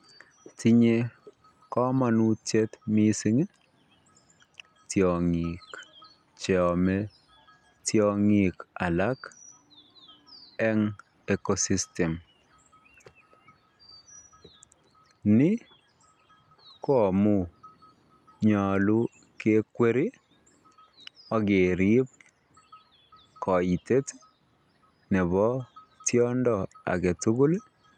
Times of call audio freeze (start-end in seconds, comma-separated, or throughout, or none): none